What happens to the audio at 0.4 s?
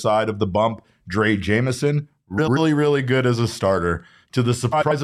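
Nothing goes wrong at 0.4 s: the speech runs on intact there, with no dropout, click, glitch or other fault at that point.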